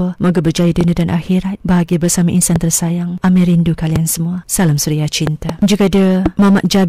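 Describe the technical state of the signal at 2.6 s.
A single sharp loud pop lands at 2.56 to 2.58 s, standing well clear of the speech, roughly 20 dB above it, while the speech carries on underneath. It is likely a sudden voltage step or pulse, from a switch, plug, static discharge or driver glitch, added onto the signal.

Beneath it, and across the whole clip, the louder speech has a harsh, crackling fuzz from hard clipping. The signal is driven about 16 dB past what a stage can pass, so around one sample in twenty is cut flat, adding high harmonics.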